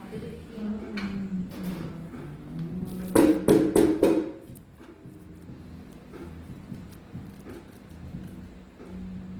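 A recording of everyday sounds, with plainly audible Opus compression throughout. Tonal and sustained parts come across grainy and rough, with a noisy fizz where clean detail should be, rather than the swirling holes typical of MP3. The likely cause is the music (CELT) mode of Opus running short of bits, so starved bands are filled with folded or synthetic content, which fits a low bitrate around 16 kbps. Bandwidth stays full, extending to about 20.4 kHz.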